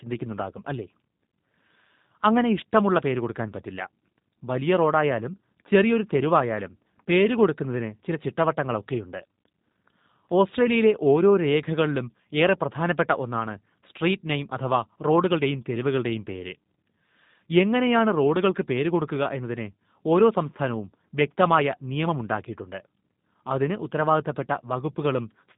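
The whole speech clip runs through the G.729 codec: nothing above 3.8 kHz, and a rough, synthetic edge from rebuilt pulses, which fits an 8 kbit/s VoIP link.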